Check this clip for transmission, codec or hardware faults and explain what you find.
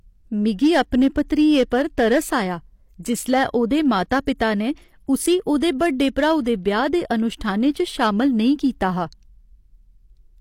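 Two faults are present: hard clipping throughout the speech, and pre-echo at two points just before the six-second mark.

Hard clipping, throughout: the loudest peaks crackle. They were driven about 7 dB past what a stage could pass, flattening roughly one percent of samples.

Pre-echo, 5.58 to 5.62 s and again at 5.79 s: a brief hiss precedes an attack that sounds smeared. The codec spread block noise ahead of the attack, over 44 ms and then 16 ms.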